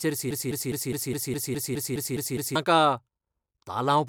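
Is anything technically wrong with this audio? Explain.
Yes. From 0.31 to 2.56 s the speech falls into a broken-record loop: a 207 ms fragment repeats exactly eleven times, likely from a stalled player or stream, and the underlying audio is lost.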